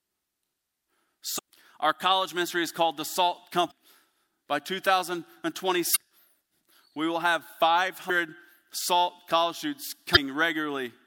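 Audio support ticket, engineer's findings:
Damaged data in a compressed stream: corrupt frames in the decoder input. Decoder loses sync and hunts for the next header, giving short glitches of about 45 ms in the speech at 1.35, 3.67, 5.92, 8.06 and 10.13 s.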